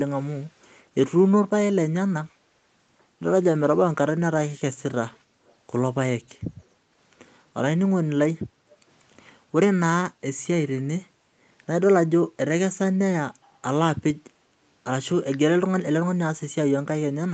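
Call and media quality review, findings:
Echo leak, 5.46–5.54 s and 8.70–8.76 s: faint delayed copy of the speech, 321 ms behind, about 40 dB and about 35 dB below it. Spectrogram shows a weak repeat of earlier harmonic bands offset by 321 ms. Likely cause: far-end echo canceller leaving residual loudspeaker pickup.

Background gated by the echo canceller, 8.49–8.8 s and 13.34–13.62 s: room noise dips about 8 dB, then about 9 dB, for roughly 0.2 s and 0.3 s. Waveform shows a notch in the noise floor. Spectrogram shows a brief broadband darkening. Canceller suppressing the mic during loudspeaker playback, then releasing.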